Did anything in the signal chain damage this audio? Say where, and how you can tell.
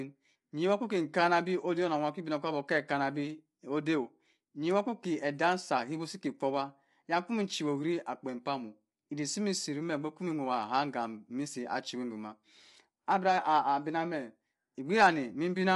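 Yes, at the codec: the speech is rough and grainy throughout, empty above 11.6 kHz, and steady rather than bursty. This is likely low-delay AAC compression, whose short frames blur harmonics.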